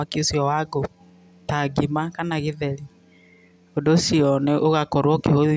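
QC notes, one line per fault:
No faults heard in this speech recording. There is nothing to log against any time in it.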